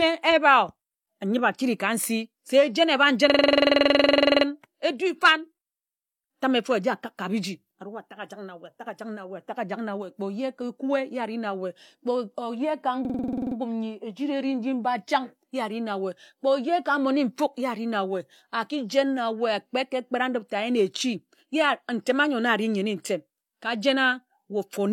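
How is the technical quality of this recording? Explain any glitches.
The speech is marred by two system hang loops, from 3.30 to 4.46 s and from 13.05 to 13.56 s. Each time the system froze while the sound hardware replayed one 46.4 ms ring-buffer chunk, which fits a 2048-sample buffer, repeating it about 21.5 times a second. The result is a rapid machine-gun stutter. Unlike dropouts or jitter, the repeats are identical, with no silence between them, and playback resumes with little or no audio missing.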